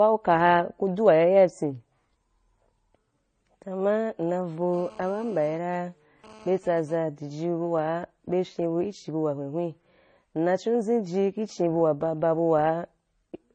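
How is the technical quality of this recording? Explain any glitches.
The recording has two faults: lossy-codec damage throughout, and a phone buzz partway through.

Throughout, the speech was likely transcoded from MP3 into AAC-LC, stacking both codecs' artefacts; the sound is dull with nothing above 9 kHz, and its grainy smearing points to low bitrates.

From 4.74 to 6.95 s, a nearby 2G phone transferring data pulses 217 times a second. The audio circuit rectifies this into a raspy, stuttering GSM phone buzz about 24 dB below the speech.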